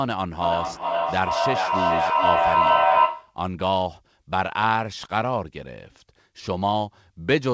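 From 0.41 to 3.41 s, feedback echo between two devices sets in: a second device in the room replays the far end, and that microphone sends it back uncancelled. The speech returns roughly every 0.4 s, thinner and ringing, building to about 5 dB above the original rather than fading.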